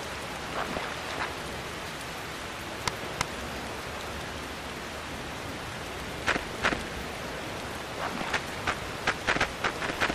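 Periodic USB or driver dropouts run from 6.19 s to 10.09 s: every 64 ms, roughly a millisecond of audio drops to silence, giving about seventy evenly spaced ticks heard over the sound, as a recurring background task stalls the audio path.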